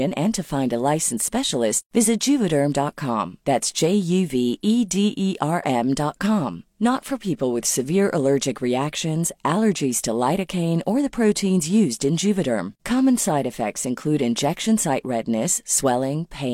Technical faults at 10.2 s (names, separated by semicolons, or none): none